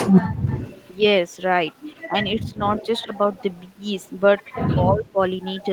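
From 0.37 s to the end, a faint delayed copy of the speech trails the main talker by 91 ms, roughly 15 dB quieter. This is an echo leak, likely a far-end loudspeaker echo that the echo canceller failed to fully remove before sending it back.

Between 2.08 and 2.61 s, and again between 4.73 and 5.18 s, the talker's speech dips in patches. It drops by around 10 dB at first and by around 15 dB later, over roughly a sixth and then a third of a second in total. This is speech suppressed in double talk, likely the echo canceller mistaking overlapping speech for echo and attenuating both.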